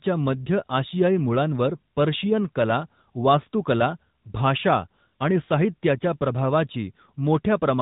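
From the start the speech carries the AMR narrowband mobile codec, and its damage is plainly audible. Everything above 4 kHz is gone, so on a spectrogram the energy stops at a hard ceiling with empty space above. The sound is buzzy and synthetic because the codec rebuilds it from a vocal tract model excited by sparse pulses. The buzzy texture fits a mid-range rate of around 10.2 kbps.

At 5.08 to 5.13 s come lost AMR speech frames, a gap of 40 ms, which matches two consecutive 20 ms frames. The decoder filled the hole by repeating the last good pitch and vocal tract settings at falling gain, so the sound smears briefly and dips rather than cutting out. On the waveform the amplitude sags over those 40 ms. On a spectrogram the harmonics flatten into a short, fading stretch before normal detail returns.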